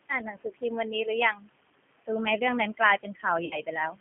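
A speech recording runs throughout through a noise suppressor pulling the steady background down by about 20 dB frame by frame, so the residual room noise, sitting about 14 dB below the speech, pumps between phrases. The G.729 codec, whose sound fits an 8 kbit/s G.729A stream, rebuilds the voice from a filter and sparse pulses inside a 150 Hz to 3.4 kHz line band, leaving it plainly rough and synthetic. Speech cut by the noise suppressor occurs at 0.09 to 0.63 s, 1.33 to 1.49 s and 2.98 to 3.25 s, where the suppressor mistook parts of the speech for noise and dropped them by up to about 18, 17 and 15 dB, so brief stretches, only a fraction of a second in each span, sound swallowed or faint. VoIP packet loss concealed by the speech codec follows at 3.45 to 3.57 s: about 60 ms of audio went missing, which fits three lost 20 ms packets, and the decoder extrapolated from its last frames, smearing the sound into a fading tone or coloured noise that stays weak briefly after the packets return.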